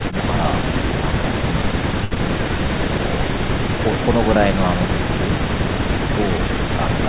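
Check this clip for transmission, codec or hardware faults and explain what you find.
Two network faults sit close together near 2.1 s in the speech, heard through a call path whose band stops at 4 kHz, which fits G.711 mu-law.

Short stall from a late packet, 2.04 to 2.13 s. A packet arrived late and the jitter buffer ran dry, so the receiver held the last sound for about 70 ms until the data turned up, then resumed exactly where it left off. Nothing is lost, but the sound just before the gap is drawn out unnaturally, with a faint buzzy, slightly sagging quality, and everything after it lands about 70 ms later.

Short concealed packet loss, 2.15 to 2.18 s. Immediately after the stall, a brief stretch never reached the decoder in time. The receiver bridged it by extending the preceding sound for about 10 ms and blending back into the real audio, but about 20 ms of genuine signal is simply gone. 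It comes across as a quick smear or wobble.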